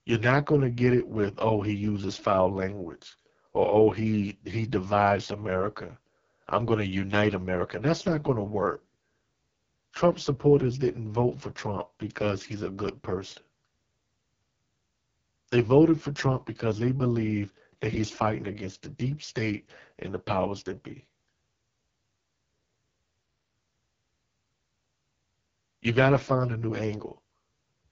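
The speech has been squeezed through the AMR wideband (HD Voice) codec at its lowest mode, 6.6 kbit/s, for the whole clip. That starves the vocal-tract model of bits, leaving the speech rough and raspy with a noisy, synthetic top end, and nothing above 7.2 kHz.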